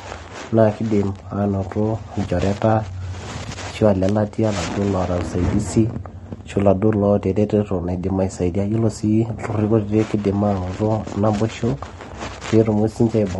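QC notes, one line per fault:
throughout, low-delay AAC compression: the speech sounds rough and grainy across the whole clip, with a noisy haze filling the gaps between voice harmonics and an upper band that sounds thin and partly synthetic. The likely cause is AAC-ELD coding at a rate that fits about 32 kbps, where the short frames resolve pitch harmonics poorly.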